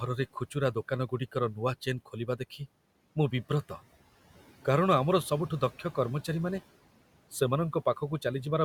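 Speech cut by the noise suppressor from 2.06 to 2.61 s, just after "ନୂଆ ଚେନ୍": the suppressor mistook soft parts of the speech for background and turned them down by up to about 13 dB, leaving roughly 150 ms sounding swallowed and faint.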